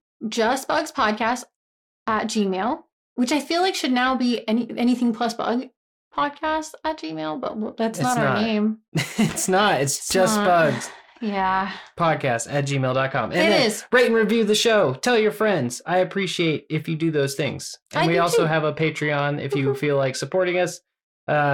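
Right through the speech there's periodic clock jitter: the converter's sample clock is being wobbled at around 1 kHz, so every component picks up sidebands spaced that far either side. You hear a gritty, metallic edge, worst on the brighter sounds, gone in the pauses.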